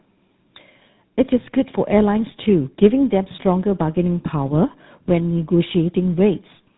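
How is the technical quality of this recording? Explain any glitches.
The quality is degraded by tandem speech coding throughout: two speech coders in series, the last consistent with GSM full rate, stack their errors, leaving rough, muffled, warbly speech with nothing above 3.8 kHz.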